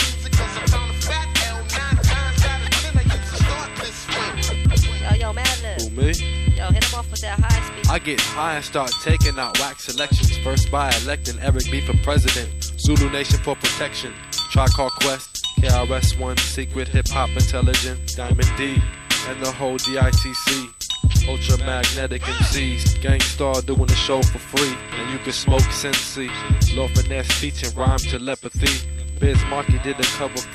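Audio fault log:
Throughout: USB whine. A fixed-pitch whine sits at 8 kHz, which is also where it is strongest, roughly 25 dB below the sound. It never changes pitch. That frequency matches the 125 microsecond microframe rate of a high-speed USB bus. Each microframe draws a pulse of current. Those pulses leak into the audio path through shared power or ground. The result is a thin, high tone laid over everything.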